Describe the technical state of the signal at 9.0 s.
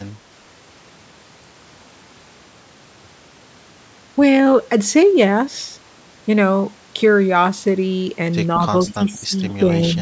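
Right around 9 s you're in the middle of a double-talk problem. From 8.94 to 9.32 s the speech gets pushed down, dipping by roughly 15 dB at its deepest, and it comes across as patchy over about 300 ms in total. That's likely the echo canceller hearing both ends active at once, failing to tell the local talker from the loudspeaker return, and ducking everything. So it's a case of speech suppressed in double talk.

Just before that, from 8.87 to 8.94 s, there's a short echo leak: a faint, delayed copy of the speech trailing by 187 ms, sitting about 20 dB under the main signal. It's the kind of thing you get when the far end's loudspeaker output sneaks back through their mic and the canceller doesn't fully scrub it, so a ghost of the speech slips through right before the suppression kicks in. The band-limiting to 8 kHz is just the normal call mic chain.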